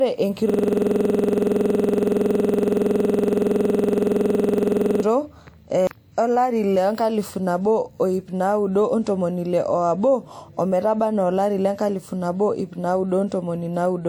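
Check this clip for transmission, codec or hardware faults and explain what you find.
One hardware fault is present: a system hang loop from 0.50 to 5.03 s. The computer or driver stalled while the sound device kept replaying the same 46.44 ms buffer, which fits a 2048-sample buffer, nearly a hundred times. That turns the speech into a rapid mechanical stutter repeating at 21.5 Hz.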